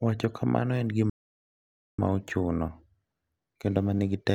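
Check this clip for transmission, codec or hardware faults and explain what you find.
One fault is audible. Playback stall, 1.10 to 1.98 s: the player likely starved for data or was blocked, so the speech cuts to silence for about 0.89 s before resuming.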